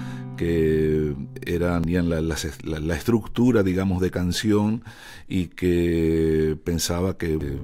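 There are two brief glitches, at 1.84 s and 7.41 s, both from damaged data in a compressed stream. A patch of the encoded bytes is corrupt there, so the decoder misreads the frame, loses sync and hunts for the next header, leaving a quick blip each time.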